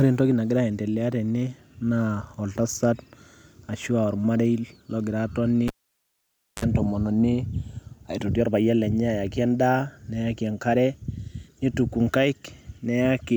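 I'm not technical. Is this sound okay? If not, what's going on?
No. At 5.68 s a live cable was pulled and plugged in again. You hear a pop, then about 0.92 s of near silence, then a brief 50 Hz mains buzz, about 54 ms, as the plug half-touches, and another pop when the speech returns at 6.65 s.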